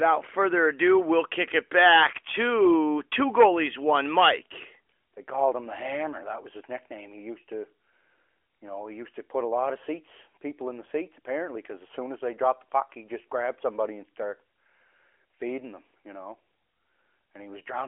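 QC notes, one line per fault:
No faults found in the speech. The AMR narrowband mobile codec path is audible as a phone-line band of roughly 300 Hz to 3.4 kHz with nothing above 3.6 kHz and only light coding roughness, which fits the 12.2 kbps AMR-NB mode.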